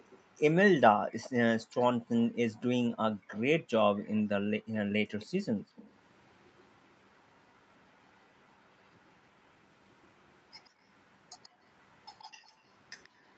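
From the start to 1.84 s a faint second copy of the sound trails the original by 133 ms, about 20 dB down. This is an echo leak, likely from a far end on loudspeaker whose echo canceller let part of the returned signal through. On a spectrogram each syllable's harmonic pattern reappears as a weaker ghost shifted 133 ms to the right.

Between 1.62 and 2.09 s the room tone drops by up to about 40 dB for roughly a fifth of a second. This is background gated by the echo canceller: while the loudspeaker signal is present, the canceller clamps the microphone hard and then releases it. The same brief hole, about 39 dB deep, occurs between 3.15 and 3.28 s. On the waveform the noise floor flattens to near silence, and on the spectrogram the low-level background band simply vanishes for that moment.

The echo leak returns from 3.28 to 4.23 s, about 25 dB down at the same 133 ms lag. It comes back again from 5.2 s to the end, fainter at about 35 dB below the speech.

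A further gated dip of about 40 dB falls between 5.59 and 5.76 s. A shallower one of about 14 dB, lasting a fifth of a second or so, falls within 11.49 to 12.6 s and shows as a short notch in the background floor.

Throughout, the spectrogram has nothing above 8 kHz, which fits the Opus call path at about 32 kbps.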